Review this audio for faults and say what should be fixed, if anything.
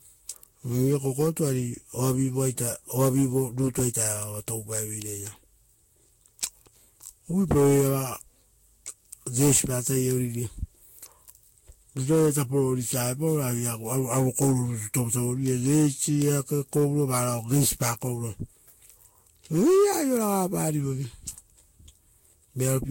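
Swirly, hollow speech with smeared consonant attacks and nothing above 16.6 kHz throughout: likely generation loss from about five Vorbis passes near 64 kbit/s, each requantising on a shifted grid. Prevent it by encoding once from the original source instead of re-encoding lossy copies.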